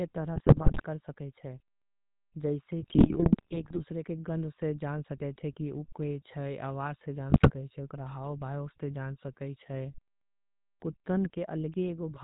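The whole thing has that GSM full-rate codec sound. Everything above 4 kHz is gone, and the speech carries the buzzy, gravelly grain you get when a vocal-tract model is driven by a coarse, decimated pulse excitation instead of the real waveform. The damage is plainly audible from start to finish, which fits the old 13 kbps full-rate coding.

On top of that, there are three patches of GSM bit errors. The first runs from about 0.36 to 0.84 s, the second from 2.8 to 3.81 s (it clears just before "के गंध"), and the third from 7.3 to 7.5 s. In each one, corrupted bits reached the decoder and scrambled the filter, pitch and gain parameters frame by frame. The spectrum lurches around and the level jumps, so the speech breaks up into squawks, pops and a wet gargling quality. The middle burst is the longest.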